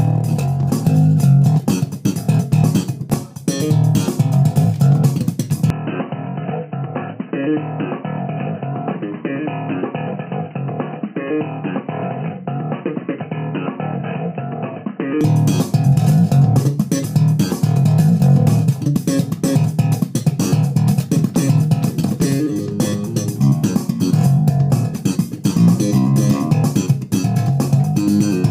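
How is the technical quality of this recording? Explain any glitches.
The recording has one clear fault, an apparent input switched to a poorer device between 5.70 and 15.21 s. The capture path most likely moved to a lesser microphone or a headset's call profile, which passes nothing above 3 kHz. For those nine or so seconds the sound turns dull and boxy, drops roughly 10 dB, and carries its own faint background noise well under the signal. The change is instant, with no silence at either switch.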